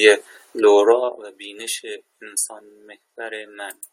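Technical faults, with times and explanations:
0.84 to 1.2 s, zipper noise: the gain was pulled down by about 15 dB in unsmoothed 2 dB jumps, roughly 30 of them a second, rather than ramped continuously. Each jump puts a small discontinuity into the speech waveform, so while the level falls a rapid ticking, zipping texture rides on top of the voice, sounding like a coarse ratchet under the sound, and it stops as soon as the gain settles.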